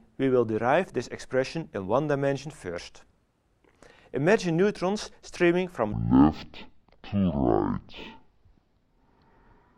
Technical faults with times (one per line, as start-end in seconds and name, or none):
5.92-9.78 stereo read as mono